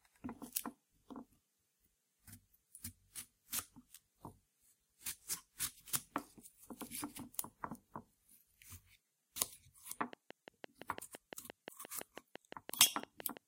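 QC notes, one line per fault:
10.13–13.38 s, train of clicks: a regular run of short, near-identical pulses at about 5.9 per second, around twenty in all, standing roughly 15 dB above the surrounding sound. Each pulse is a brief spike added on top of the audio, so it is heard as steady ticking over the material, including in quieter moments. The even spacing and repeated shape point to a periodic source, likely electrical interference from nearby equipment or a faulty connection or power supply.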